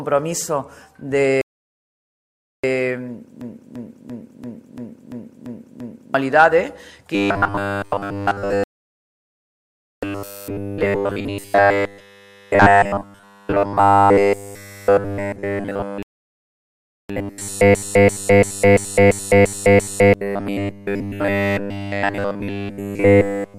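At 1.41 s a rebuffering stall drops the sound into silence for about 1.2 s, until 2.64 s. Playback then resumes exactly where it stopped, so nothing is skipped, unlike the looping faults.

From 3.41 to 6.14 s a system hang loop repeats one 341 ms slice eight times, at 2.93 Hz. That length fits a 16384-sample ring buffer. About 3 s of audio is lost.

From 7.15 s to the end there is robotic sound from repeated short buffers. A rigid metallic buzz fixed at 100 Hz runs through the sound, likely because 10 ms fragments are being repeated. It differs from the hang loop because its repeats are far too short to hear as separate stutters.

Rebuffering stalls return at 8.64 to 10.03 s, adding about 1.4 s of silence, and at 16.03 to 17.10 s, adding about 1.1 s.

A second system hang loop runs from 17.75 to 20.14 s, cycling a 341 ms slice seven times and losing about 2 s of audio.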